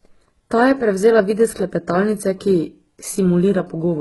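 All the way through, this speech carries the mixed artefacts of transcoding between lossy codecs, likely a low-rate HE-AAC encode that was re-encoded as Opus. The second codec wastes bits on the first one's artefacts, and nothing gets through above 12 kHz.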